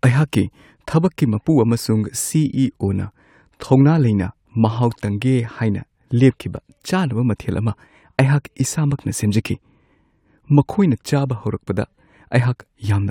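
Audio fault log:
Speech recording checked, no faults found.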